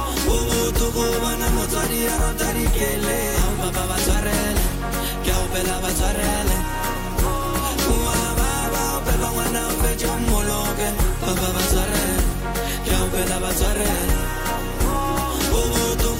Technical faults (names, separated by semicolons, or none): loud pop